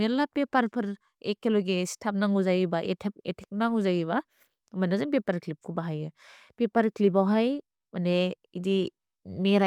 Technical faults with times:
none

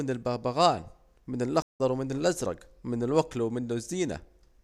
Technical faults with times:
1.62-1.80 stream reconnect

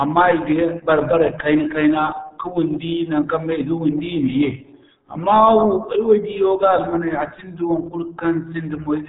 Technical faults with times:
0.00-9.09 RealAudio 14.4 codec

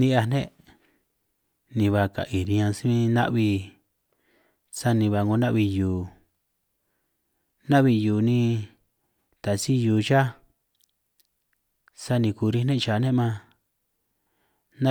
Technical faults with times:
2.45 block of digital silence

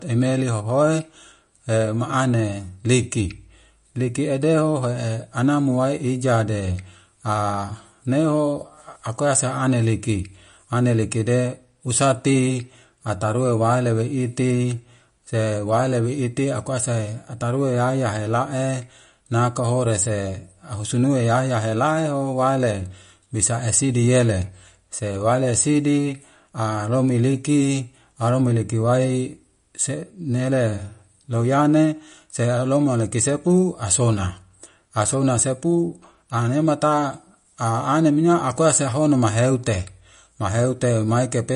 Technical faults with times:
0.00-41.56 MP3 compression

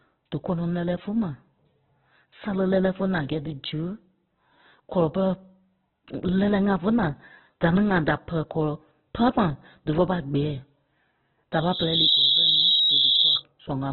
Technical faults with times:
0.00-13.93 Opus compression
11.52-13.43 loudspeaker feedback squeal

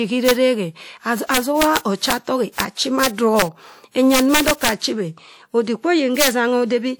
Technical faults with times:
0.00-6.99 transcoding between lossy codecs
0.29-0.31 integer overflow
1.34-2.13 integer overflow
2.60 integer overflow
3.03-3.42 integer overflow
4.14-4.69 integer overflow
6.20-6.28 integer overflow

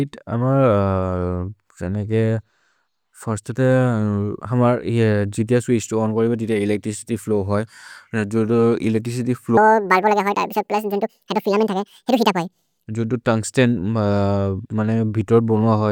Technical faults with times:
9.57-12.86 section at the wrong speed

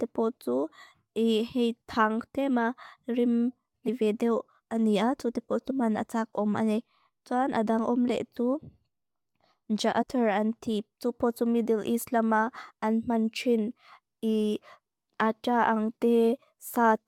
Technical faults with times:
3.87 compressed frames skipped
5.69-5.71 compressed frames skipped
10.01-10.03 compressed frames skipped

